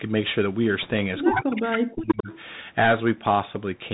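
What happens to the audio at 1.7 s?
Around 1.7 s the speech sits inside a stretch of speech suppressed in double talk, from 1.31 to 2.3 s. The echo canceller, likely confused by both sides talking at once, pulled the talker down, so the speech sinks by as much as about 40 dB and breaks up for roughly a second.

An echo leak lands within that stretch, from 1.72 to 1.78 s. Loudspeaker pickup that was probably not fully cancelled is sent back, so a brief delayed copy of the speech, trailing by 100 ms and about 10 dB quieter, is audible.

Underneath both runs the Bluetooth CVSD headset codec at 64 kbps. Its one-bit delta steps can't track fast, bright sounds, so the speech stays band-limited, grainy and hissy, and sibilants rasp.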